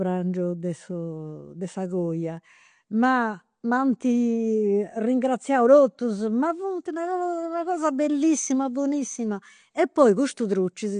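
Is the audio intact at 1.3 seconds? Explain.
No. AAC compression likely squeezed this speech at a low bitrate, consistent with about 32 kbps AAC-LC, coarsely quantising each frame's spectrum throughout the clip. At 1.3 seconds nothing sounds above 9.8 kHz, leaving the audio dull and smeared with a warbling, fizzy edge on sibilants.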